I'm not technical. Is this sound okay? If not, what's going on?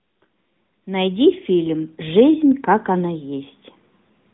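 No. AMR narrowband mobile codec, throughout: the speech went through a phone-call codec that drops everything above 3.8 kHz and rebuilds the voice, leaving it muffled and plainly buzzy.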